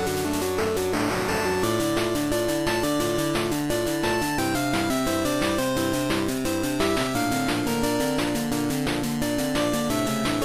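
No technical faults can be heard anywhere in this audio.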